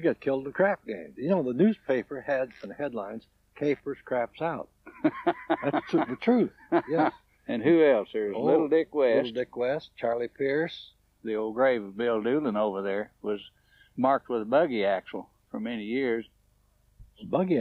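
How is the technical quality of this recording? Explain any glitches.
No glitches or faults heard.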